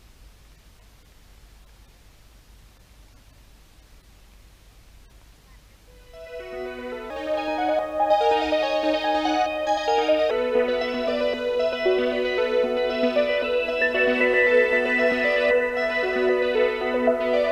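From 7.10 s to 10.31 s a section at the wrong speed plays 1.25 times too fast, so the sound turns both higher, by about four semitones, and hurried, then snaps back to normal. The likely cause is an editor or player fitting that stretch to the wrong clock. What separates it from a pitch-shift or time-stretch fault is that pitch and tempo rise together and in proportion, rather than one changing alone.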